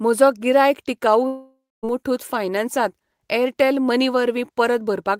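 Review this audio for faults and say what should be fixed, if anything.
From 1.27 to 1.85 s the speech breaks off. The last sound is stretched into a fading buzz or hiss, then about 0.25 s of near silence follows. About 0.56 s of audio is lost for good. This is likely a long network dropout. A more stable connection, a deeper jitter buffer and redundant packet coding would help prevent it.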